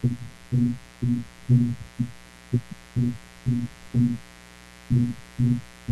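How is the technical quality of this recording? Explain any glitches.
The recording is compromised by a mains buzz running under the speech from start to finish. The buzz is built on a 60 Hz supply, sitting roughly 25 dB below the speech. It likely enters through a dimmer, rectifier or unshielded cable, where sharp switching spikes occur twice per mains cycle and spray harmonics of 60 Hz up into the kilohertz range. Unlike a smooth, low-pitched hum, this has a raspy, edgy quality that reaches well into the upper frequencies.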